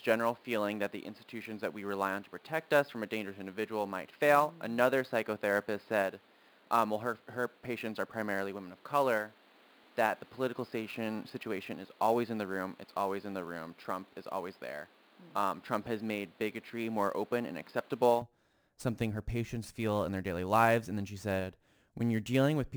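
Sample clock jitter runs through the whole recording. The converter's clock wanders on the order of 10 microseconds, so samples land slightly early or late. That timing error becomes a grainy hiss roughly 25 dB below the speech, strongest on loud, bright syllables and absent in pauses.

From 0.0 to 18.22 s, the sound has nothing above 5.1 kHz and carries a steady noise floor about 30 dB under the speech, giving it a dull, boxy tone. This most likely comes from the input being switched to a poorer device. At 18.22 s the band opens up again, with no gap and no noticeable jump in loudness.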